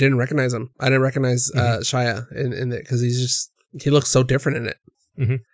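No technical faults are audible.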